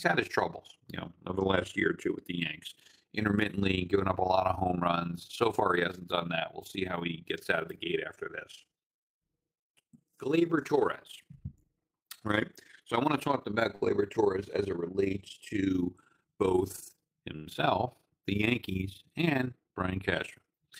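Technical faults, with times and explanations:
Throughout, overlap-add ripple: the speech was split into windowed frames and rejoined with an overlap whose gains do not add up evenly, so the level swings by about 11 dB once per frame, roughly 30 times a second, giving a rough tremolo.
13.75 to 13.83 s and 17.36 to 17.48 s, short stall from a late packet: each time a packet arrived late and the jitter buffer ran dry, so the receiver held the last sound for 50 ms and then 91 ms before carrying on with nothing lost, which leaves a sound drawn out with a faint buzz or dip.
16.22 to 16.52 s, jitter buffer speed-up: with more audio queued than it wanted, the receiver cut out short pitch-period pieces again and again, about 40 ms in all, so the speech runs at 112% speed at the same pitch and sounds briefly hurried.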